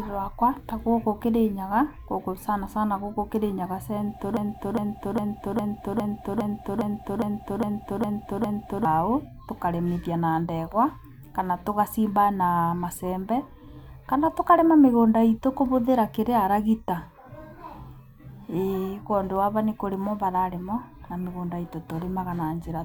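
A stall in the playback or streaming chain, likely a player or encoder that froze and kept resending the last fragment in its buffer, produces a broken-record loop in this speech recording. From 4.37 s to 8.85 s, a 0.41-second slice of speech repeats exactly, back to back, 11 times, giving a rigid stuttering cycle. Whatever should have been heard during those four and a half seconds is missing, and the audio resumes afterwards with that stretch gone.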